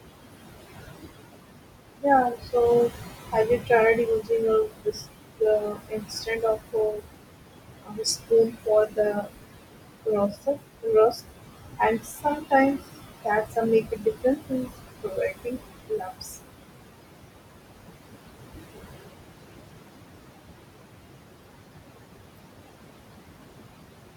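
The noise suppressor runs through the whole clip, treating the steady room noise, which sits only about 7 dB below the speech, as something to strip out frame by frame, pulling it down by about 21 dB. With the noise that close to the speech, the bands it lowers shift constantly, so the background ducks away in the gaps and comes back up under the speech.

The same suppressor also mistakes parts of the speech for noise and turns them down with the background, at 3.32 to 4.31 s, 4.68 to 5.05 s, 5.4 to 7.01 s, 7.85 to 9.29 s, 10.06 to 10.86 s, 11.79 to 12.52 s and 13.25 to 16.37 s. This speech cut by the noise suppressor touches only fragments of each span, from a fifth of a second up to about a second in the last, longest stretch. The drops reach about 14 to 21 dB, so soft consonants and word endings sound swallowed or faint.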